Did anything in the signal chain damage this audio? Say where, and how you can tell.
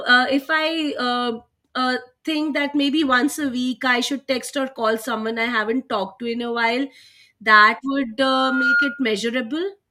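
Yes. From 8.23 to 9.19 s a loudspeaker feedback squeal forms in the acoustic path between loudspeaker and microphone: a single 1.4 kHz tone swells over about half a second to roughly 5 dB above the speech. That swelling build-up, not an abrupt fixed-level tone, marks runaway loop gain.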